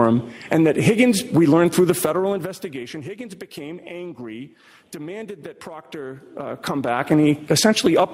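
From 1.88 to 2.96 s the level drops by roughly 15 dB, with audible zipper noise. The change moves in coarse 2 dB steps, about seven a second, with no smoothing between them. Each jump leaves a small click, so a ticking rides on the sound as it fades. From 6.2 to 7.24 s the level climbs back by roughly the same amount, and the same stepped zipping returns.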